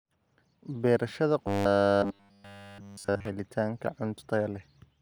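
Robotic sound from repeated short buffers runs from 1.47 s to 3.25 s. The speech collapses into a rigid metallic buzz at 100 Hz, likely because incoming audio stalled and the same 10 ms fragment kept looping, while virtually none of the real signal got through.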